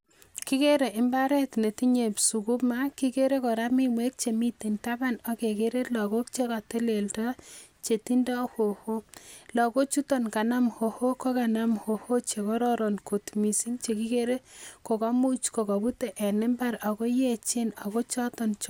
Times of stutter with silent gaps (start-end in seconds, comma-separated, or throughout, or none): none